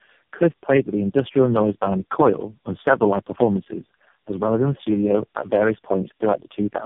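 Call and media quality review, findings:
Tandem speech coding throughout. Rough, muffled, warbly; nothing above 3.6 kHz. Suggests four narrowband codecs in series, each re-encoding the previous one's degraded output.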